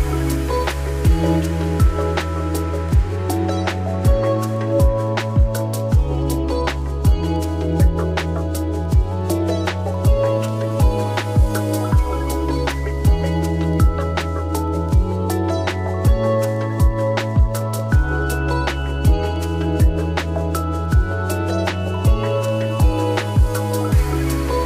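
No technical faults can be heard anywhere in this clip.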